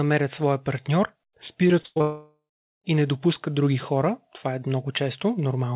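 From 1.68 to 2.02 s there's repeated packet loss with a robotic sound: four short holes, the longest 100 ms, each patched by repeating the last sound, so nearly half that stretch turns choppy and robotic. From 2.02 to 2.86 s the audio is gone, with a fading smeared buzz and then roughly 0.4 s of silence. That's likely a long network dropout, and the sound resumes at "и не допускат други" with the gap's content lost. Throughout, nothing comes through above 4 kHz, which fits narrowband G.711 A-law at 64 kbps on the call path.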